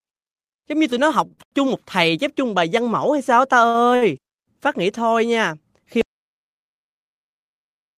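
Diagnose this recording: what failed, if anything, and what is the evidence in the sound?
Short stalls from late packets point to the network and jitter buffer. Right after "giống như tụi nó", sounds hang at 1.27, 1.33 and 1.44 s for 34, 51 and 78 ms. After "mẫu hay sao ta", two more stall at 3.70 and 3.96 s for 43 and 57 ms. The receiver stretched the last audio while waiting. Nothing is lost.

An audio dropout to silence starts at 6.01 s and lasts to the end. The sound cuts off mid-flow. The gap is silent, with no room tone. The likely cause is a lost input at the capture stage while the recorder kept writing silence.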